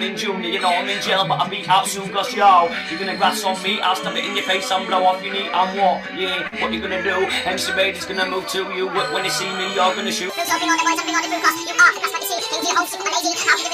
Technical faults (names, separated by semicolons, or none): short concealed packet loss; section at the wrong speed